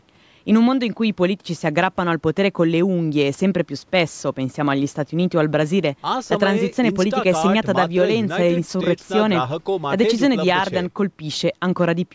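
No technical faults can be heard in this speech.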